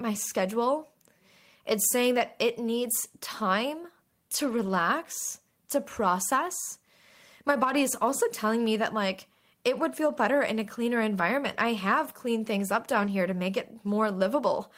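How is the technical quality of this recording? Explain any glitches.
The speech has five brief rough patches at 4.35–4.81, 7.69–7.75, 10.07–10.09, 11.45–11.55 and 12.91–13.09 s. These are lost packets rebuilt from error correction: low-bitrate copies carried in following packets fill each loss. The audio turns grainy and noisy, but it never goes silent or smears, unlike plain concealment.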